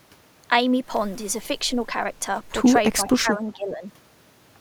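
Speech suppressed in double talk runs from 3.01 to 3.84 s: the voice sinks by up to around 10 dB, affecting about 0.7 s of that stretch. The likely cause is an echo canceller confusing this talker with loudspeaker echo while both sides spoke, and turning both down.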